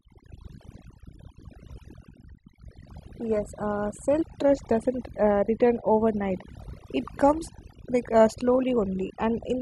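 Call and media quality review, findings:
Overdone noise removal, throughout: background drops and breaks up into twinkling specks. Noise suppressor set too aggressively, cutting individual frequency bands near its noise estimate and taking quiet speech components with them.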